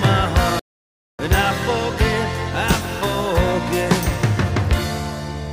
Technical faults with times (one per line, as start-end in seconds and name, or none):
0.59-1.22 stream reconnect